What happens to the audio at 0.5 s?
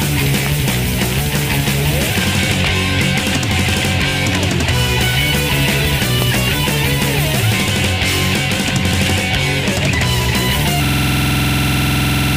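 There's a loud pop right there, from about 0.46 to 0.49 s: a single sharp crack standing roughly 10 dB above the surrounding sound, which keeps going underneath. It's likely a sudden voltage step, from a plug, a switch, static or a driver glitch, that got shaped by the downstream circuitry.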